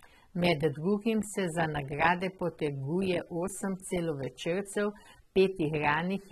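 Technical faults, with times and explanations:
Throughout, AAC compression: the codec damage is plainly audible, with nothing above 13.9 kHz. This fits AAC-LC near 27 kbps as the likely cause. At that rate the encoder quantises each frame's spectrum coarsely against its hearing model and drops the top band.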